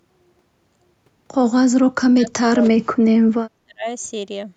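From 1.98 to 2.34 s, the speech sinks sharply, by about 35 dB at its deepest. It recovers briefly, then drops again from 2.51 to 3.86 s, this time by about 40 dB, with around a second of it swallowed in pieces. This is speech suppressed in double talk. The likely cause is an echo canceller that could not tell this talker from loudspeaker echo while the far side spoke, so it muted both.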